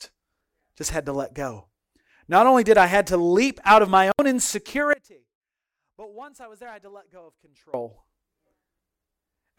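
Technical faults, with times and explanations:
4.93–7.74 s, audio dropout to a faint residue: speech cuts abruptly for 2.8 s, leaving a faint leak about 25 dB down, likely from a signal break on a still-live path, unlike a natural pause.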